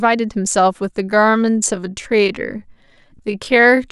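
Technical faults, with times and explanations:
1.0–3.91 s, time-stretched section: from 1.0 s to the end the speech suddenly runs at 0.645 times its pace but keeps its pitch, so it drags, likely from software repeating short pieces to lengthen it. A spectrogram shows unchanged harmonic spacing with widened syllables.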